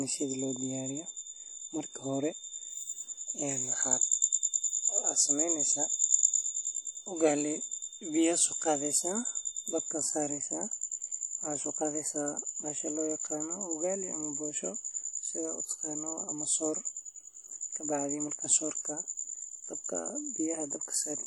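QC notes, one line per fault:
Throughout: WMA compression. The speech carries a ringing, washy smear with a hiss that swells and fades along with the voice, and nothing is heard above 18.7 kHz. This is the likely result of a transform codec with long blocks, whose quantisation noise spreads over tens of milliseconds around each sound and zeroes weaker detail, consistent with a bitrate near 48 kbps. Unlike steady broadband noise, this hiss follows the signal and sits inside it.
0.0 to 9.95 s: feedback whistle. A thin, steady tone at 3.6 kHz runs behind the speech, well below it at roughly 25 dB down, swelling and fading slowly in level before it stops at 9.95 s. The likely cause is a loudspeaker-to-microphone loop held right at the edge of feedback, so one frequency keeps sounding without building up. Unlike mains hum or an electrical whine, it is a single high pitch that never grows into a howl.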